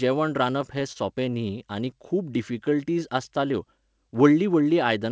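From 0.62 to 0.97 s, repeated stalls (stutter): packets kept arriving late, so the jitter buffer ran dry four times. The receiver held the last sound over each wait, about 55 ms in all, the longest 28 ms, roughly 15% of that stretch, so the speech drags and stutters without losing anything.

At 1.34 to 1.38 s, just before "आनी खूब", a short stall from a late packet: one packet missed its playout slot and the buffer emptied. The receiver stretched the preceding sound for 17 ms until the packet arrived, leaving a briefly held sound with a slight buzz or dip, and the delay grew by 17 ms.

From 2.51 to 3.30 s, after "आनी खूब", a jitter buffer slow-down: with its reserve low or its target delay just raised, the receiver repeated single pitch periods and small pieces of pauses to add about 70 ms. Speech plays at 92% speed at unchanged pitch, sounding drawn out. Throughout, the WebRTC call path's codec leaves nothing above 8 kHz, so the audio has a band-limited call quality.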